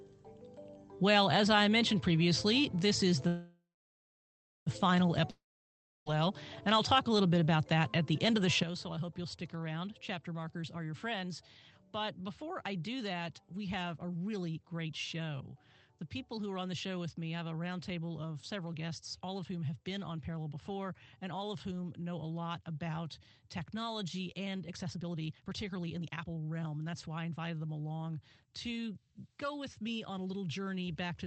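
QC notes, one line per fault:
3.27–4.68 s, call audio freeze: packets were likely held up and the jitter buffer ran dry, so the last sound is stretched into a fading buzz that settles into about a second of silence. The audio then resumes where it stopped, adding a 1.39 s gap with nothing lost.
5.30–6.08 s, long network dropout: audio likely stopped arriving for about 0.76 s. The receiver fills the hole with a short fading continuation of the last sound, then roughly 0.66 s of silence, and the sound comes back further on with that stretch missing.
8.63 s onward, sudden gain jump: a digital gain step of about −10 dB was likely applied without a ramp. Sound and background noise drop together in a single instant and stay at the lower level to the end.
14.18–15.21 s, 18.43–21.40 s, 24.67–27.50 s, jitter buffer speed-up: the buffer was holding more audio than its target, so the receiver kept cutting short pitch-period pieces to shrink the delay. 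Playback runs at 108%, 110% and then 135% with pitch unchanged. It trims about a tenth of a second, a few tenths, then about a full second, and the last run sounds clearly hurried. The Opus call path limits the band to about 8 kHz throughout.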